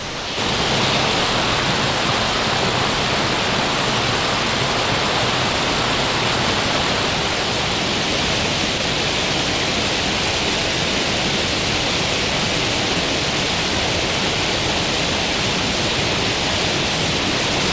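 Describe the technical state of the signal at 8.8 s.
At 8.78 s the sound drops out for about 20 ms and a brief patch of steady noise or near silence takes its place before the signal resumes. This is likely sound dropped by the voice detector: the sender judged that instant to be background, stopped transmitting, and the receiver filled the gap with comfort noise. Unlike a packet-loss gap, there is no stretched or repeated fragment and no hard cut to digital silence, only a steady comfort-noise fill, band-limited like the rest of the G.722 call audio to nothing above 8 kHz.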